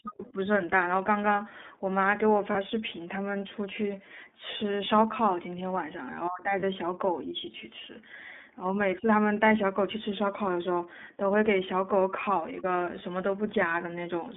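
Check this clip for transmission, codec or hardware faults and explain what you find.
There are two problems: the whole clip runs through the iLBC codec, and two short dropouts show lost iLBC frames.

iLBC codec: for the entire speech clip, the band sits between about 250 Hz and 3.6 kHz, with nothing on top. Each 30 ms frame's excitation is coded on its own, which points to the 13.33 kbps mode. The damage is plainly audible: a slightly rough, synthetic edge on the voice.

Lost iLBC frames: at 2.52 s and again at 6.6 s, a 30 ms chunk goes missing. The decoder fills it by repeating the last pitch cycle mixed with noise, so you get a brief held, buzzy vowel. Because frames stand alone, the voice snaps right back.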